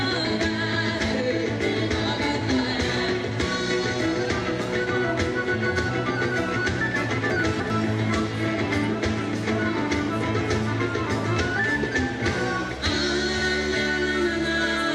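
From 7.3 to 7.7 s, chunks play out of order: one 100 ms chunk arrives three chunks late, producing a jumbled moment where nothing is missing, unlike a dropout.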